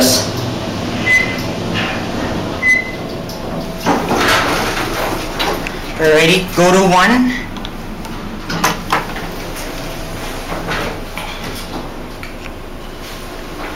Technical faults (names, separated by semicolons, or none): hard clipping